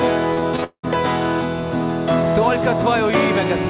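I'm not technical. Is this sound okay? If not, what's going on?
No. From about 0.34 to 0.85 s the sound turns choppy and robotic, with little pieces dropping out, the longest lasting nearly a fifth of a second. This is repeated packet loss (robotic sound): bits of audio kept getting lost or arriving late on their way through the call connection, and each hole was covered by stretching out the sound just before it. About half of that stretch is this patched-in filler rather than the real audio.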